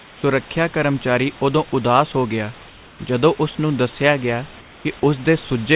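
In three pauses the room background turns into a flat, featureless hiss about 3 to 4 dB quieter: from the start to 0.23 s, from 2.69 to 2.99 s, and from 4.61 to 4.85 s. The real background sits roughly 26 to 27 dB below the loudest sound. This is comfort noise in place of the background, likely from discontinuous transmission, with the receiver synthesising shaped noise while the sender goes silent. The call path carries nothing above 4 kHz.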